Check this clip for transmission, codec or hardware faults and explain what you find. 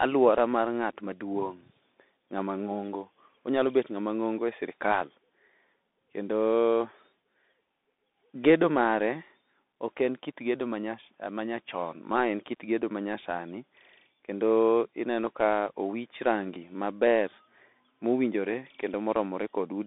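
A Bluetooth CVSD headset codec runs throughout the speech. Its one-bit delta coding, which fits a 64 kbps link, confines the band to roughly 200 Hz to 3.6 kHz, roughening loud highs and sibilants over grainy hiss.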